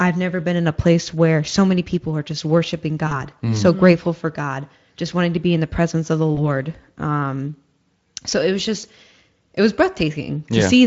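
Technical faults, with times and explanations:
3.07–3.13 s, 6.35–6.44 s and 8.79–8.85 s, VoIP packet loss concealed by the speech codec: after "people are just worshiping", after "the presence of the" and after "so it was", about 40 ms, 20 ms and 40 ms of audio go missing. The Speex decoder fills each gap by repeating its last pitch and spectral shape at falling gain, so the sound smears into a brief buzzy tone or coloured noise that fades. Because each frame builds on the previous one, the sound stays weak or distorted for a moment after packets resume.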